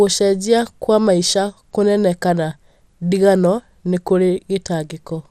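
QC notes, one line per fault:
throughout, MP2 compression: the speech sounds dull and gurgling, with a granular roughness clearly audible. This is likely an MPEG Layer II encoder running short of bits, at a rate that points to about 80 kbps. Starved of bits, the coder quantises its sub-bands coarsely and switches the highest ones off. On a spectrogram the energy stops at a flat ceiling at 15.1 kHz, with blocky patches flickering in and out beneath it.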